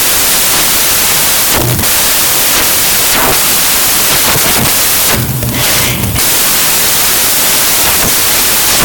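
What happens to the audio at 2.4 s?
At 2.4 s the audio is loud, harsh broadband noise from samples built from the wrong bytes, a fault that runs through the whole clip rather than starting there. Each sample's bytes are assembled wrongly, so the rapidly changing low-order bits land in the high-order position and dominate the value. Unlike added background hiss, which stays steady, this noise tracks the signal.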